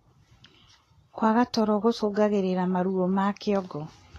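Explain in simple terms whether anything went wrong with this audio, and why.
Yes, something's off, and it runs through the whole clip. The speech sounds hissy and a bit grainy, the edges of sounds are smeared rather than crisp, and there's nothing at all above 14 kHz, so the top end feels shut off. That's likely Vorbis compression at a fairly low quality setting: the encoder trims the highest frequencies and stores the remaining treble so roughly that the fine detail turns into a rough, noisy texture.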